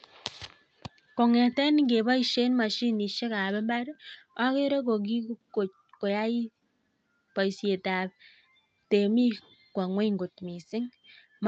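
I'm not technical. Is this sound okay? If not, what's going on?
Yes, this sound is okay, and nothing is going wrong with it.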